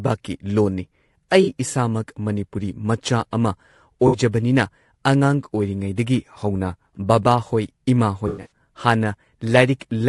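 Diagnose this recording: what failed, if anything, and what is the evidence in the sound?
The speech carries plainly audible codec damage across its whole length. The stage is the codec. The sound is rough and grainy, with a noisy fill between the pitch harmonics and an upper band that sounds thin and synthetic. That points to low-delay AAC compression, likely AAC-ELD at a bitrate around 32 kbps. Its short frames resolve harmonics poorly. At this bitrate the encoder spends bits thinly, so the gaps fill with shaped noise.

AAC frame loss with concealment appears three times. The stage is the network, where frames go missing before decoding. At 1.43 to 1.50 s there is a brief smeared, phasey patch of about 40 ms. At 4.07 to 4.17 s a similar noisy smear lasts about 60 ms. These durations fit two and three lost 20 ms frames. The decoder rebuilds each gap from the last good spectrum, with scrambled phase. 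Right after "ꯍꯧꯅ ꯕꯥꯕꯥꯍꯣꯏ", from 8.27 to 8.49 s, the damage is heavier. About 200 ms of audio is missing, scattered over roughly 240 ms. The longest unbroken stretch is around a tenth of a second.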